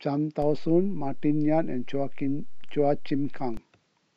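At 0.42 s a DC step occurs: the waveform's zero line jumps by about -27 dBFS and holds until 3.57 s, when it steps back. Each transition produces a low thump, while the speech itself carries on unaltered across the offset.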